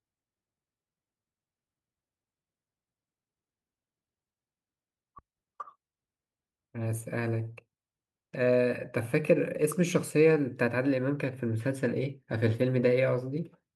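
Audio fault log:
No faults are heard anywhere in the speech. Nothing in the recording needs a log entry.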